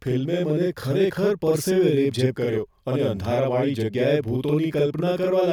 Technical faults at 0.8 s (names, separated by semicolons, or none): channel delay (doubling)